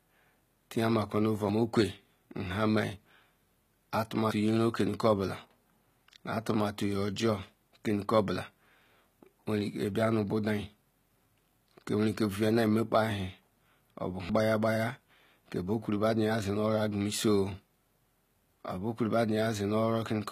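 Across the whole speech clip the treble sounds synthetic: s sounds come out gritty and lispy, the upper harmonics don't sit in line with the lower ones, and nothing is left above 14.9 kHz. This is likely HE-AAC compression at a low bitrate, consistent with roughly 20 kbps. Only the lower band is truly coded, and the top is rebuilt by copying lower bands upward under a coarse envelope, so it stays bright but is no longer the original.

At 1.49 s, 4.31 s, 14.29 s and 15.10 s there is an abrupt forward jump in the speech and no gap of silence. The first and last skips are short, around 40 ms, and the middle two are longer, around 150 ms. These are dropped buffers (overrun), likely caused by the program failing to read its samples before the hardware overwrote them, so the missing stretch vanished and its two edges were butted together.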